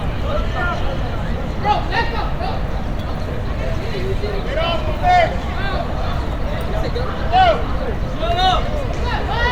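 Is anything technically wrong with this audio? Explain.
No, no faults are audible.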